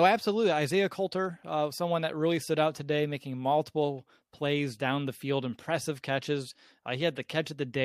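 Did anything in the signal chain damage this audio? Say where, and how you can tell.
No, nothing audible in this speech recording points to damage at any stage of the signal chain.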